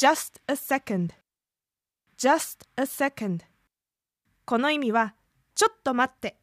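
No technical faults can be heard anywhere in the recording; the speech signal stays intact throughout.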